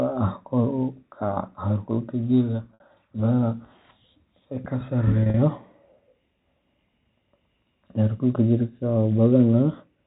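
From 0.79 s to 3.30 s a loudspeaker feedback squeal rises at 4.3 kHz, taking roughly two seconds to build until it sits somewhat above the speech. The microphone was hearing its own loudspeaker, and loop gain above unity at that frequency let the tone grow.

Packet loss with pitch repetition occurs at 2.72 to 2.82 s and again at 5.23 to 5.37 s. In each, about 80 ms of audio is missing, consistent with eight 10 ms packets. The receiver bridged the gaps by looping the last pitch period, giving brief buzzy, held sounds. The longer 60 ms run in the first event fades further toward silence before the speech cross-fades back. The G.711 telephone coding itself adds no more than faint damage.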